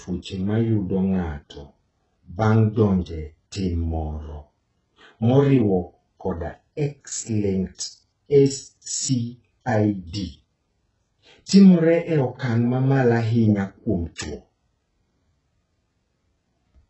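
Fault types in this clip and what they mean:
HE-AAC compression: the speech's upper band is rebuilt by copying lower bands upward rather than coded, so its treble sounds mismatched, s sounds turn gritty and lispy, and nothing reaches above 8 kHz. The heavy damage likely reflects a very low bitrate, around 8 kbps.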